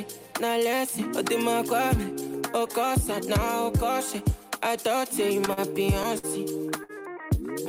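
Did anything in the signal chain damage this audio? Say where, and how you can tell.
Yes. Four short stalls from late packets: at 5.45–5.49 s, 5.53–5.59 s, 6.18–6.25 s and 6.83–6.91 s the sound sticks on one moment, held with a slight buzz or dip, before carrying on without a gap. The stretches grow from 15 to 41, 52 and 59 ms. This is a network fault. Packets arrived late, the jitter buffer ran dry, and the receiver stretched the last audio until each packet turned up, so nothing is lost, only delayed.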